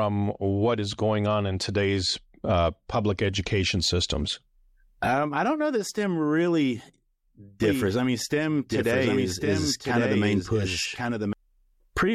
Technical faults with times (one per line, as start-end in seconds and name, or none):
7.63-11.33 doubled audio track